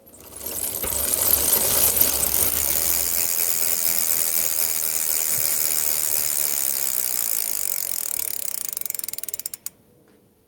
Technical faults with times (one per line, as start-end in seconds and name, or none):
0.00-10.47 gain pumping